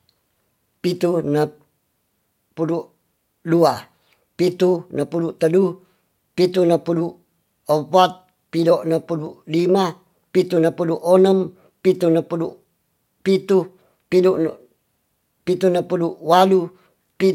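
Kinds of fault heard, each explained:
Nothing here stands out as a technical fault; the speech comes across steady and even the whole way, with no glitches to point to.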